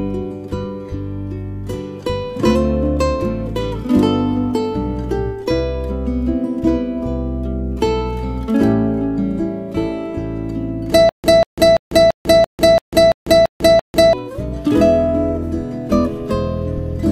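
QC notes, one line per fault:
11.09 to 14.13 s, stutter with silent gaps: a 191 ms burst repeats nine times, each followed by 147 ms of digital silence, one cycle every 338 ms. A stalled stream replaying its last fragment is the likely cause. The audio for that stretch is lost.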